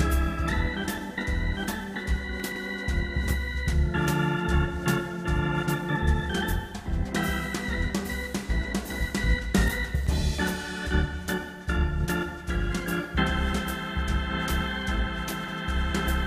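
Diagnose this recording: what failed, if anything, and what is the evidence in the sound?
Chunks out of order at 2.40–2.56 s and 15.44–15.52 s, a buffer or network fault. A 40 ms block plays late, three blocks behind at 2.40 s, one behind at 15.44 s, so the sound briefly jumbles, with three hard joins.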